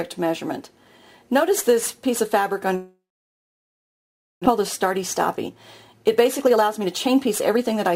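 Long network dropout, 2.75 to 4.48 s. The audio stops arriving, and the receiver fills the 1.70 s hole on its own. It carries the last sound on briefly as a fading buzz or hiss, then leaves 1.43 s of silence. When the sound resumes, about a second of the original has been skipped. The likely cause is a stall in packet delivery, which also left playback running roughly 0.7 s later than before.

Jitter buffer speed-up, 5.48 to 7.89 s. After the stall, the buffer holds more audio than its target. To shed the excess, the receiver repeatedly cuts out short pitch-period-sized slices, removing around 0.4 s in total. The audio plays at 115% speed with its pitch unchanged, so this stretch sounds noticeably hurried and rushed compared with the material before the dropout.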